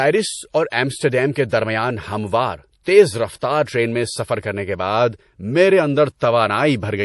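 Running short of bits, the encoder discards all content above 11.5 kHz and drops weak detail, likely from MP3 compression at a low bitrate near 48 kbps, so the speech sounds dull and watery throughout. From 0.70 to 0.72 s, pre-echo appears: quantisation noise spreads backward about 22 ms ahead of a sharp attack, leaving a brief hiss before it and softening its onset.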